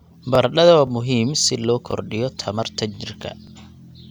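A speech recording with a small, regular stutter that ticks through it like a metronome, a click-like doubling at 0.35, 0.87, 1.39, 1.91, 2.43, 2.95 and 3.47 s, about every half second, with one just before "muhiim si loo" at 0.87 s and one right after it at 1.91 s. This is overlapping chunks: the audio was handled in 0.5 s pieces, each starting 20 ms before the previous one ended, so that 20 ms slice plays twice at every join.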